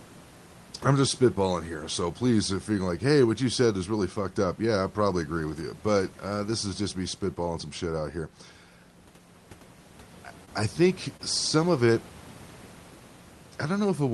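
A speech recording with two brief smears, at 10.45–10.49 s and at 11.17–11.21 s just before "some of it": short concealed packet loss, where about 20 ms of audio arrived too late and the receiver stretched the preceding sound across the gap. Room noise sits about 23 dB below the speech.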